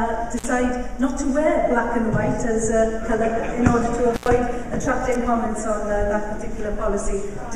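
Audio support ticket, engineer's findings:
Intermittent contact: loose cable or plug briefly opening the line. Signal drops with crackle at the edges, at 0.37–0.45 s (about 49 ms open) and 4.14–4.28 s (about 99 ms open).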